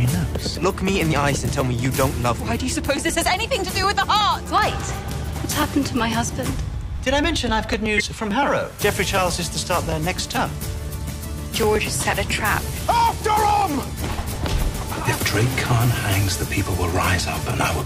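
From 0.14 s to 17.71 s runs a train of periodic USB or driver dropouts, one every 0.124 s, roughly eight per second. Each time, something stalls the USB bus or the audio driver and about a millisecond of audio is simply skipped, so the signal closes up on itself with a small discontinuity. The result is a steady ticking that rides on the signal. Its strict, unchanging spacing sets it apart from the one-off codec faults below.

At 5.30 to 5.33 s, compressed frames are skipped. A stretch of roughly 70 ms of encoded audio never reaches the output, either because it is missing or because the decoder discarded it, and playback jumps forward. The seam is a single glitch where the audio leaps ahead, and it happens once, off the dropout rhythm.

From 6.95 to 6.98 s comes a corrupt frame decoded, which sounds like a short run of damaged frames played as if valid. Flipped bits scramble gains or spectral codes, so energy appears at frequencies the sound never had, peaking around −15 dBFS. 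It is heard as a brief burst of wrong sound. Unlike a skip, something wrong is added.

At 7.97 to 8.01 s, frames are skipped again, this time losing roughly 50 ms, with the same jump ahead.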